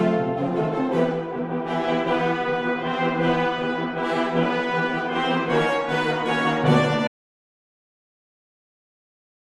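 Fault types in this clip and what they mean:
Audio dropout to silence: at about 7.08 s the sound just cuts out mid-flow and never comes back, so the last two and a half seconds or so are dead digital silence right to the end. There's no room tone or hiss underneath, just flat silence, which points to the input going away while the recorder kept writing. Most likely a device disconnected, a link failed or something got muted, and whatever came after that moment is simply gone.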